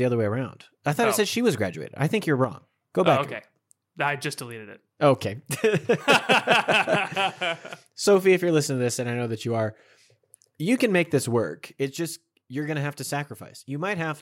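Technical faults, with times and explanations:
2.44 to 2.51 s and 11.79 s to the end, one channel drops out: the speech suddenly falls by about 6 dB. The first dip is a brief 70 ms gap in level. The second lasts about 2.4 s and never recovers. The likely cause is one stereo channel going silent before the mono sum. Sound common to both channels then arrives at half strength, and anything carried only in the lost channel vanishes.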